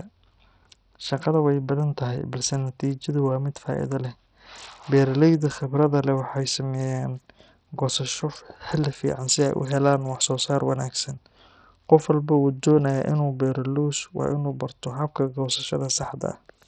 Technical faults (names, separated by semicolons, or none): Bluetooth SBC compression